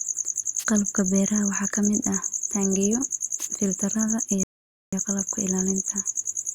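A speech recording carries two brief swishes of static, at 0.58 to 0.65 s and at 3.38 to 3.48 s just after "ka mid ah taangiyo". These are wireless microphone noise hits, where the FM radio signal faded and receiver noise rose through the sound. At 4.43 s, right after "mid ah taangiyo filtarrada", the audio drops to silence for about 0.49 s and then picks up exactly where it stopped. This is a rebuffering stall: playback ran out of downloaded audio and waited for more, losing nothing but adding time.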